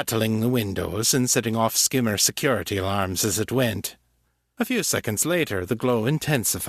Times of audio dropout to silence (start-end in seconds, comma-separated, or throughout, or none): none